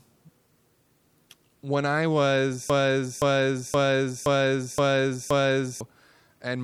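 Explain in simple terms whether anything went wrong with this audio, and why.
Something did go wrong. From 2.70 s to 5.81 s the speech stops moving forward and one short piece, about 0.52 s long, plays over and over, six times in a row, like a stuck record. This is a broken-record loop. The likely cause is that the player or stream stalled and kept resending the last bit of audio it held. Whatever should have been heard during those three seconds is gone.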